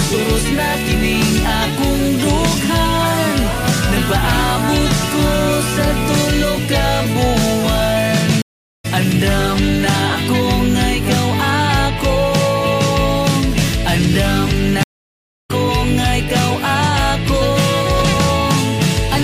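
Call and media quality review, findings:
Stream reconnect, 8.42–8.86 s and 14.83–15.51 s: dropouts of 0.42 s and 0.66 s, then audio resumes a few tenths of a second further on. Network/transport layer. Connection dropped, player reconnected and restarted the decoder mid-stream, skipping content.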